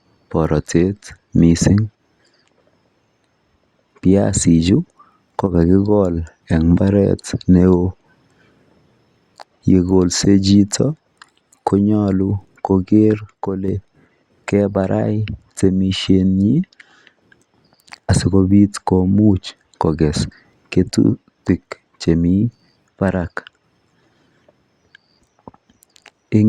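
At 5.46 to 5.51 s and again from 13.19 to 13.68 s, the speech abruptly drops by about 6 dB, likely one channel dropping out before the mono sum. A waveform shows a sudden step down in amplitude; a spectrogram shows a uniformly dimmer band with sharp edges.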